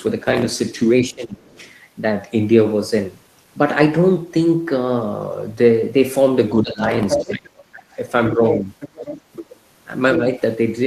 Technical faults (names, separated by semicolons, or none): speech suppressed in double talk; other side's voice leaking through